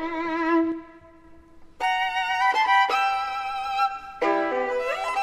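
At 0.72 s the level drops abruptly by about 4 dB, sound and background noise together, and stays down until 1.24 s, when it snaps back. This sudden gain jump is likely a digital gain setting applied instantly, with no ramp between samples.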